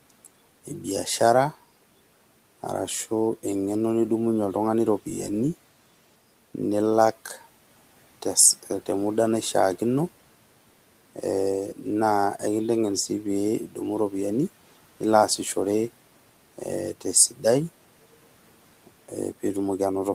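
A speech clip with one instance of speech cut by the noise suppressor, from 17.3 to 17.44 s. The suppressor mistook quiet speech for background and pulled it down by about 9 dB. For about a tenth of a second the sound turns faint and swallowed. Room noise sits about 25 dB below the speech.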